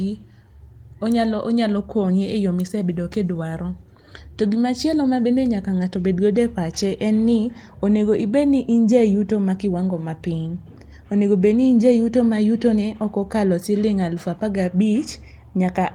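No technical faults can be heard anywhere in the speech recording; the signal stays continuous and steady throughout.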